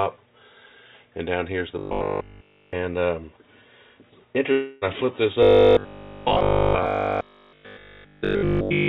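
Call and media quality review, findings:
Robotic sound from repeated short buffers, 1.79–2.73 s and 5.43 s to the end: rigid metallic buzz at 50 Hz, so each repeat is 20 ms, with nearly all the real audio skipped. Likely cause: audio arriving too seldom at the jitter buffer. Unlike a dropout, the buzz persists and still loosely tracks the sound.

Long network dropout, 4.52–4.84 s: about 300 ms of audio lost, with the gap bridged by roughly 294 ms of fading fill and no true silence. Likely cause: packet loss on the network. Unlike the robotic buzz, the fill decays instead of holding a fixed pitch, and the sound resumes with a gap in its content. The G.711 A-law path audibly caps the band at 4 kHz.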